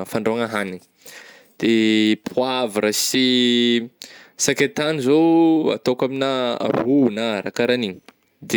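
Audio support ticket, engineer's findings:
No technical faults found: the speech signal holds steady throughout, with no dropouts, level jumps or other defects audible.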